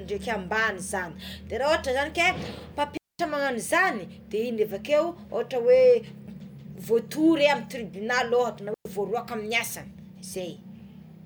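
Speech, with two digital wireless dropouts. The receiver mutes to near silence at 2.97 s for 220 ms and at 8.74 s for 110 ms. No noise burst surrounds either hole.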